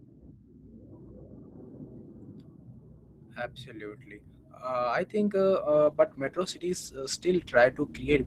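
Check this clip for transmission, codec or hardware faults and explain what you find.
One fault is present: a call bitrate drop starting at 5.73 s and running to the end of the clip. For those final 2.5 seconds the speech turns rough and muffled, with a watery, smeared texture. The call's bandwidth estimate fell, so the encoder went from 32 kbps to 13 kbps. At that rate it codes far more coarsely and discards high frequencies, and it never recovers before the clip ends.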